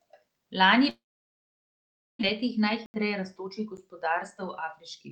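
A long network dropout runs from 0.89 to 2.25 s in this speech clip. The sound of the last moment before the gap is stretched into a fading buzz, which soon gives way to near silence for about 1.2 s. This is likely caused by packets failing to arrive, so the receiver had to conceal about 1.3 s of missing audio. When the speech resumes, about 820 ms of it is simply gone, and the stream returns roughly half a second later than it had been running. A jitter buffer speed-up follows from 2.43 to 5.09 s. With a backlog of queued audio to work off, the receiver repeatedly snips out short pitch-period slices, so the speech plays at about 105% speed without any change in pitch. Around 150 ms in total is trimmed, and the talking sounds slightly rushed. Two blocks of digital silence interrupt that stretch. The first, from 2.86 to 2.94 s, cuts the signal to silence for 80 ms, leaving an audible hole with hard edges where no fade smooths the cut. 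The second, at 3.77 s, lasts only about 9 ms and is heard as a single tick. Both fit an output buffer that was not refilled in time.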